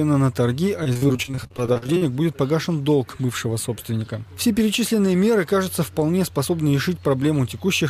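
From 0.83 to 2.03 s there is repeated packet loss (robotic sound): a dense run of short dropouts, the longest about 44 ms, each bridged by extending the preceding audio. About a third of that stretch is synthetic fill, producing choppy sound with pieces missing.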